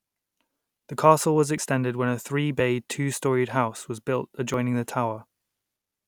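Jumps at 1.58 s after "castle was", 2.6 s after "when a" and 4.54 s after "house was built" each skip about 20 ms of speech with no gap. The cause is likely a dropped buffer (overrun), where samples were overwritten before being read.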